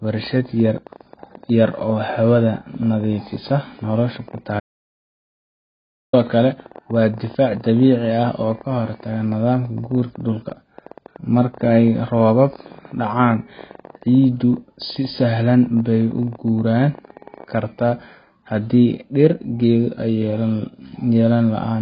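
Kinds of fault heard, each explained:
AAC compression: The speech is dull and smeared throughout, with a warbling, fizzy texture on sustained sounds and sibilants. Nothing survives above 5 kHz, and the damage is heavy, which fits AAC-LC at a very low bitrate, around 16 kbps, as the likely cause. On a spectrogram the energy stops flat at the 5 kHz line, with blotchy holes and patches of substitute noise scattered through the bands below.
Train of clicks: From 0.05 s to 17.45 s a run of sharp, similar-shaped ticks sits over the speech, coming about 15 times a second at an uneven pace. They continue through the pauses and peak at roughly the level of the speech itself, some three hundred in all. Interference from nearby equipment or a faulty connection is the likely source. On a waveform they are thin spikes, and on a spectrogram narrow vertical lines spanning the band.
Audio dropout to silence: At 4.60 s the speech cuts off mid-flow and returns at 6.13 s, leaving a gap of about 1.53 s. 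The gap is silent with no room tone or background remaining, and whatever was said in that stretch is lost. A disconnected input or failed link, with the recorder writing silence, is the likely cause. The waveform shows a near-flat line, and the spectrogram shows a fully blank column.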